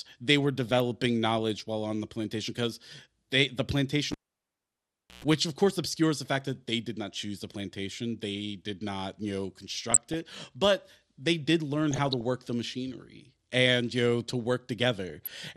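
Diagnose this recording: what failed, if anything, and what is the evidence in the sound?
MP2 compression throughout, codec stage: dull, gurgling, granular speech suggests a likely low-rate MP2 encode near 80 kbps, with upper sub-bands starved of bits.

DAB burbling at 0.68–0.80 s after "they were", 9.91–10.34 s after "did not you know", 11.91–12.21 s before "the machinery and you", and 15.10–15.32 s. These noise blips come from the network or transmission path: bit errors corrupt MP2 sub-band data.

Cable pulled and plugged in at 4.12–5.24 s, analogue wiring: a pop, about 1.08 s unplugged, including a 0.12 s burst of 60 Hz buzz before the final pop.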